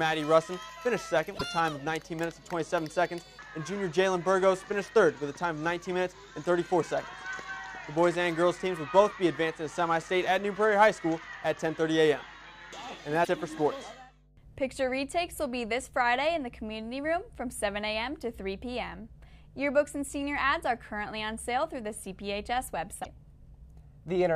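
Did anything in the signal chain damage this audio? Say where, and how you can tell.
Yes: brief garbled skips at 1.37–1.42 s, 13.23–13.28 s and 23.03–23.06 s point to the codec stage, likely a broken MP3 bit reservoir, with lost frames leaving the following 26 ms frames decoding the wrong data.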